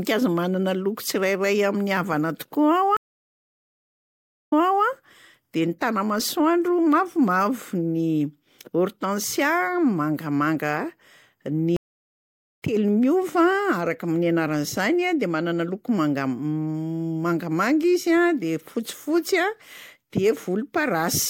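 At 2.97 s the speech cuts to silence for 1.55 s, then returns at 4.85 s about 0.34 s behind where it stopped, so a short stretch is heard twice. At 11.76 s it drops out again for 0.85 s and resumes at 12.62 s roughly 0.7 s ahead, skipping material. Both are stream reconnects: the connection broke, the player went quiet, reconnected and started a fresh decoder mid-stream. Unlike a plain dropout, the timeline jumps on resumption.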